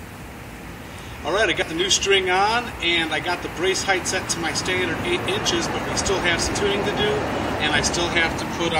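A chunked recorder likely drops audio at each handover, causing audio missing between chunks: skips at 1.62 s and 4.07 s, each losing roughly 50 ms, about 2.5 s apart.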